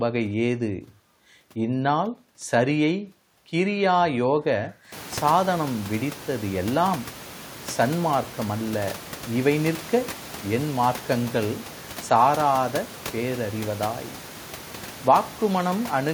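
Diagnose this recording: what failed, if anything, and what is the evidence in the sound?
Nothing in this speech recording points to a failure at any stage of the chain. The background noise of the room climbs by about 25 dB at around five seconds and then sits about 17 dB below the speech, which is a change in the room's own sound rather than something the system added.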